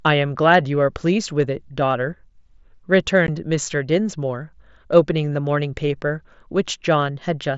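Unconcealed Bluetooth headset packet loss at 3.27 s: a gap of about 15 ms opens in the speech, which fits two consecutive 7.5 ms mSBC frames failing to arrive between headset and phone. With no concealment to bridge the hole, silence or an idle pattern stands in for the missing audio, so the voice cuts out and returns with hard edges. The wideband mSBC path, with its light graininess on louder syllables, carries the sound on either side of the dropout.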